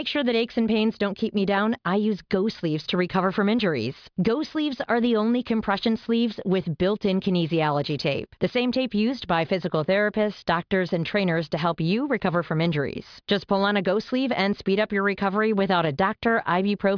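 No technical faults can be heard anywhere in the recording.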